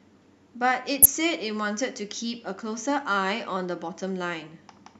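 At 1.02 to 1.06 s the speech is interrupted by a corrupt frame decoded: flipped bits in what sounds like a single compressed frame were played as if valid, so misread gains and codes put energy at the wrong frequencies, giving a loud, brief chirp or burst of noise peaking around -5 dBFS.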